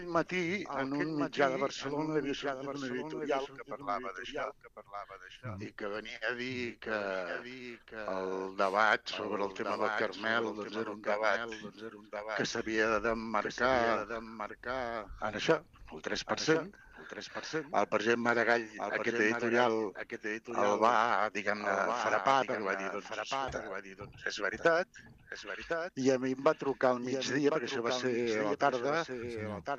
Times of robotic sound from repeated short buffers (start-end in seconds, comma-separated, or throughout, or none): none